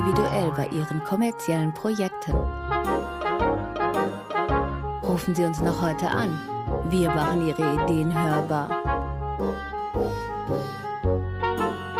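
No technical fault can be heard anywhere in the audio. Nothing in it draws attention to a problem with how it was captured, processed or delivered.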